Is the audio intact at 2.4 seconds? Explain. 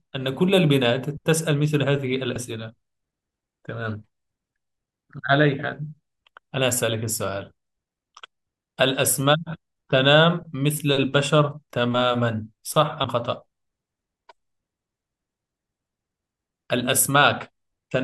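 No, there's a small glitch right around 2.35 s in this speech clip, where compressed frames were skipped. About one frame's worth of audio, roughly 30 ms, is missing. That fits a single 26.1 ms frame that either wasn't in the file or was thrown out by the decoder as damaged, so playback jumps ahead.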